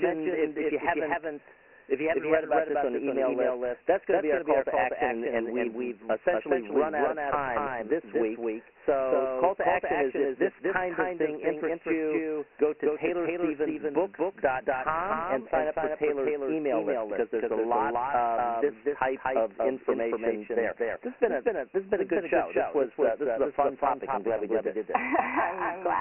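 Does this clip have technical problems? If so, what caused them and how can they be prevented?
Yes. Throughout the speech, a second full-band copy runs about a fifth of a second behind at roughly the same loudness, with no decay or room colour, giving a hard slapback on every syllable. This doubled audio track is likely caused by a second capture path or an edit holding two copies out of step. Prevent it by monitoring a single source and muting any parallel or loopback route before recording.

Across the whole clip the speech sounds thin and gritty, with a hiss that tracks the voice and nothing above 2.9 kHz. This is heavy Dialogic VOX ADPCM damage: 4-bit OKI ADPCM at 24 kbps, which fits 6,000 samples a second, inside a 250 Hz to 3.5 kHz line band. Prevent it by recording or archiving in a linear PCM format at a higher sample rate instead of VOX.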